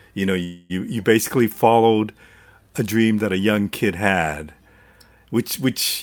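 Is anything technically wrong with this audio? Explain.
Yes. From 0.43 to 0.72 s, between "you know" and "you basically followed", there is a call audio freeze: the last sound stretches into a fading buzz for about 260 ms, likely from delayed packets draining the jitter buffer. Unlike packet loss, nothing is dropped; speech resumes exactly where it stopped, just later.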